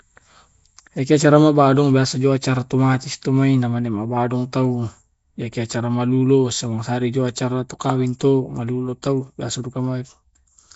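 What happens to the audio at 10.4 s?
At 10.4 s the speech carries the same damage heard through the whole clip: a rough, hissy halo and a smeared, underwater quality, with nothing above 7.7 kHz. This is likely Nellymoser compression, Flash's old microphone codec, which fits a rate around 32 kbps. It codes fixed 256-sample blocks and fills starved bands with noise. Unlike MP3's swirling, warbling artefacts, the damage here is a rough, hissy halo around the speech.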